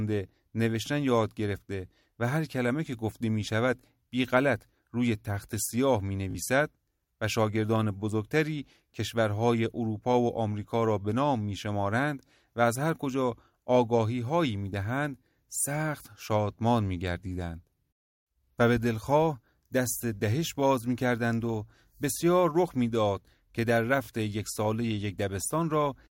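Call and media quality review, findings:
Buzzy stutter at 6.31–6.35 s and 24.04–24.08 s: Bluetooth stutter, 37 ms missing each time, fitting two lost packets. Receiver repeated its last buffer, then jumped ahead.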